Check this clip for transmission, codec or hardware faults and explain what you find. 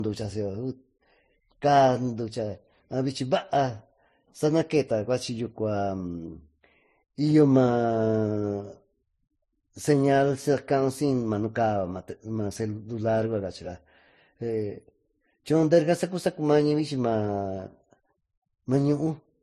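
One codec fault runs through the whole recording. The speech shows stacked compression damage consistent with transcoding between lossy codecs. Throughout, nothing remains above 12.5 kHz, and different codec artefacts are heard together. That is likely an MP3 encode re-encoded to Vorbis, both at low rates around 35 kbit/s. The second encoder wasted bits on the first one's errors, and each left its own distortion.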